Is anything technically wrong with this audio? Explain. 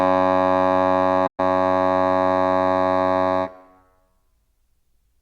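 Yes. From 1.26 to 1.40 s in this music, AAC frame loss with muting leaves the decoder zeroing about 128 ms of spectrum, consistent with roughly six frames, so the sound fades into a soft-edged gap.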